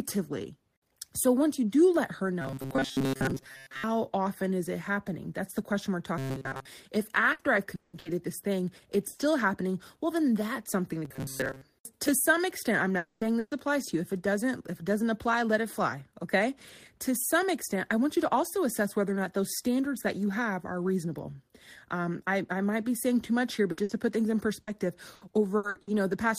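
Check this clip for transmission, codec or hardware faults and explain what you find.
The speech in this clip shows several transmission faults, all of the kind produced when audio arrives late or incomplete over a network.

Robotic sound from repeated short buffers occurs at 2.42–3.85 s (after "you do let her", before "often is it happening"), 6.18–6.65 s and 11.05–11.61 s (after "then that's something to", before "to some extent i'm"). The likely cause is playback repeating the last fragment when fresh audio runs late, with most of each stretch recycled. A fixed 134 Hz buzz results, which fits a buffer of about 7.5 ms.

Repeated packet loss (robotic sound) covers 7.33–9.22 s, with four gaps totalling 420 ms and the longest 180 ms. It recurs at 23.71–25.90 s after "saying too much here", with seven gaps totalling 420 ms and none over 60 ms. Each hole is patched by extending the preceding sound, so the speech turns choppy with pieces missing.

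A long network dropout at 12.97–13.24 s likely stems from a stall in delivery. About 240 ms never plays and is bridged by a continuation of the last sound that fades without reaching silence. The speech then resumes further on.

A burst of packet loss follows at 13.39–13.54 s. About 120 ms is lost and filled by a fading extension of the prior sound, a brief held buzz or hiss, before the speech picks up past the missing part.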